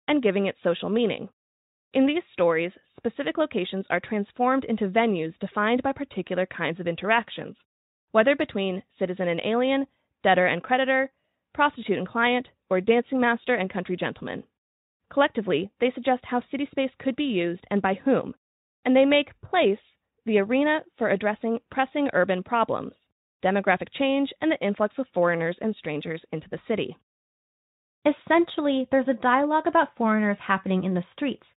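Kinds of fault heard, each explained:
No faults are audible here.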